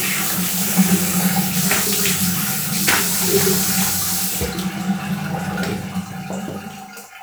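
Nothing here calls for a technical note; the sound runs along without any audible fault at any point.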